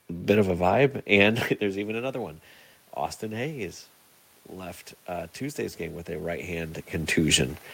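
From 4.59 s to 7.21 s the input fell by about 14 dB, so the automatic gain control rose gradually, adding about 3 dB over 2.6 s. The speech and room noise swell together, unlike the talker's own movement near 6.5 s.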